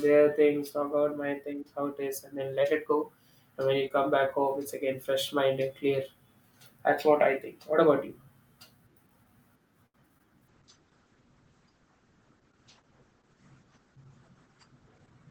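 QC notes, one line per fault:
2.61–3.49 s, drift correction step: the playback rate jumps up by 5.5% in a single step and holds there for just under a second before snapping back, so speed and pitch rise together by about 93 cents, nearly a semitone. Voiced sounds in this span come out audibly sharp and slightly hurried. This is most likely a clock-matching stage adjusting its rate abruptly to drain or refill its buffer rather than easing in gradually.
9.87 s, short stall from a late packet: a packet arrived late, the jitter buffer ran dry, and the receiver stretched the last sound for about 76 ms until the data turned up. Playback then resumed from exactly where it stopped, so nothing is lost, but one sound is held unnaturally long with a slight buzz or dip, and everything after it sits 76 ms later than before.
10.18 s, short concealed packet loss: about 20 ms of audio never arrived in time, and the receiver covered the gap with roughly 15 ms of synthesized continuation of the preceding sound before blending back into real audio. 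The result is a brief smear or wobble at that point.
10.48 s to the end, call bitrate drop: the encoder was pushed from 64 kbps down to 9 kbps, and audio bandwidth narrows from 20 kHz to 8 kHz. Everything from here on loses its top end and air, sounding muffled, and the coarser coding adds a rough, watery texture that persists through the end without recovering.
13.63–14.54 s, jitter buffer speed-up: with excess audio queued, the receiver trimmed short pitch-period chunks repeatedly, removing around 70 ms over this stretch. Playback runs about 8% fast at unchanged pitch, so this passage sounds rushed while still carrying the muffled, low-bitrate character.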